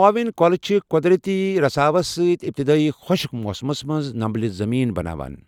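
No technical faults are audible.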